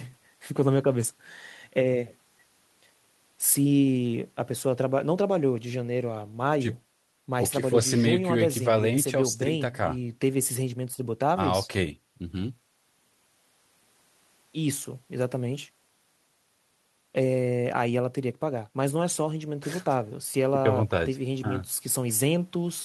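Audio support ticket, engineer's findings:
No audible faults found anywhere in the speech recording.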